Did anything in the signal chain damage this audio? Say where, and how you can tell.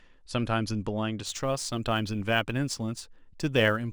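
Yes: sample clock jitter at the converter from 1.26 s on. A hiss some 30 dB below the speech follows loud, bright sounds and drops out in pauses, unlike steady noise.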